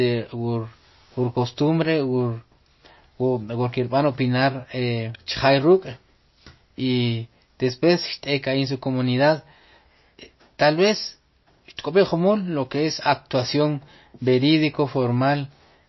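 MP3 compression, likely the cause of the damage heard from start to finish. Nothing sounds above 5.8 kHz, so s sounds lose their edge, and the speech takes on a plainly audible watery swirl as weak frequency lines flicker on and off, pointing to a low bitrate near 26 kbps.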